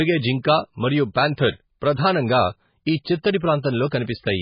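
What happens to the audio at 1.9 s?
At 1.9 s the speech carries the same damage heard from start to finish: heavy MP3 compression, likely at a very low bitrate in the region of 16 kbps. Starved of bits, the encoder removes everything above about 5.1 kHz, so s sounds lose their edge, and it discards quieter frequency lines that then flicker in and out between frames. The result is a dull, watery, swirling texture with smeared consonant attacks.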